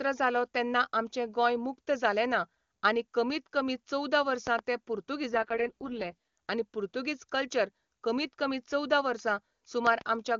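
At 4.47 to 4.61 s, just after "आनी कमीत कमी चोवदा", a loud pop lands as two sharp clicks, likely from a voltage glitch, standing as tall spikes above the waveform.

From 5.30 to 6.38 s, an AMR rate drop roughens the speech into a synthetic rasp without any gap. The spectrogram keeps its full band but the harmonics smear, which fits a fall from 23.85 to 6.6 kbit/s.

At 9.87 to 10.03 s, a second, louder double pop appears as paired vertical streaks.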